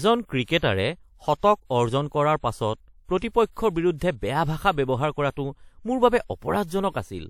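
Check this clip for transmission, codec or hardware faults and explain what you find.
Three brief pre-echo events affect this speech, all from a transform codec. At 0.44–0.48 s (38 ms), 3.20–3.22 s (21 ms) and 3.96–4.01 s (55 ms), just before "বেয়া ভাষা ব্যৱহাৰ কৰাটো", a short hiss precedes and softens sharp onsets. The codec spread noise sized for each loud attack across its whole block.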